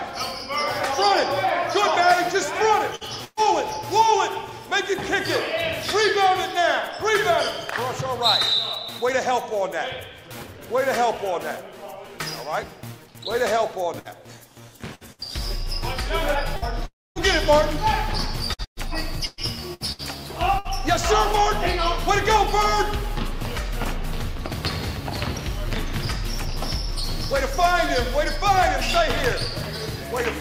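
Six bursts of packet loss break up the audio, at 2.95, 3.25, 13.99, 14.95, 15.13 and 16.56 s. Each removes about 60 ms, except the one at 3.25 s, which removes about 120 ms and ends in a brief silence. In every case the receiver stretches the last sound into a short fading buzz or hiss, then resumes further on with the intervening material gone. From 16.86 to 17.19 s there is a long network dropout, with the likely cause being no packets arriving for roughly 300 ms. The concealment carries the preceding sound for a short time, but most of the stretch, about 230 ms, falls to silence before the audio returns with that portion missing. Between 18.54 and 20.68 s, repeated packet loss produces choppy, robotic sound. Seven separate holes open in quick succession, the longest about 120 ms, and each is patched by extending the previous fragment before the next loss hits. About a quarter of that stretch is concealment rather than real signal, which gives the passage its choppy, stuttering texture.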